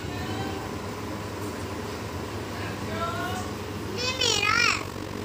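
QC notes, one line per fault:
4.18–5.24 s, overlap-add ripple: level pumps about 11 dB at around 50 Hz, frames overlapping without summing flat, so it turns into a metallic buzz.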